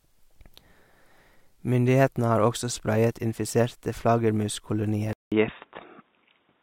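At 5.13 s the speech drops out for 188 ms, then returns dull and boxy, with nothing above 3.8 kHz. The input was likely switched to a poorer device.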